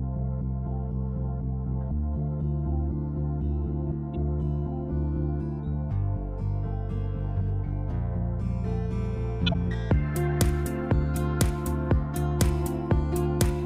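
A corrupt frame decoded at 9.47–9.55 s: damaged compressed data, likely spanning about three frames, was played anyway, misplacing energy into a brief burst peaking around -15 dBFS.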